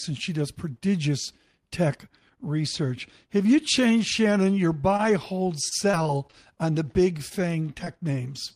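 At 4.81 to 4.95 s, a short concealed packet loss removes about 20 ms of speech. The decoder bridges it with roughly 15 ms extrapolated from the preceding sound, leaving a brief smear; on a spectrogram the harmonics run on too smoothly, then rejoin. Right after, at 4.97 to 5.01 s, a short stall from a late packet empties the jitter buffer. The last sound is held for 20 ms and nothing is lost, but playback now sits 20 ms later, heard as a drawn-out syllable and visible as a flat, repeated stretch in the waveform. From 5.69 to 6.35 s comes repeated packet loss (robotic sound): five gaps totalling about 100 ms, the longest 22 ms, with about 15% of the span patched. Speech turns choppy, and a spectrogram shows frame-sized blocks of copied harmonics. At 7.85 s another short concealed packet loss replaces about 20 ms, heard as a brief smear.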